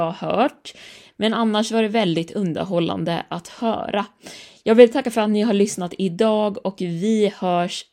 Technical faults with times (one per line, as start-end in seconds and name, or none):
none